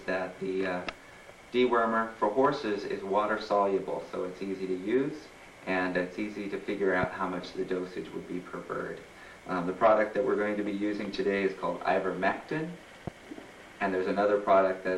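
A loud pop lands at 7.03 to 7.06 s, and another at 13.07 to 13.10 s, each a single sharp hit around 10 dB above the sound, which carries straight on underneath. It's likely a voltage spike from a plug, switch or static discharge.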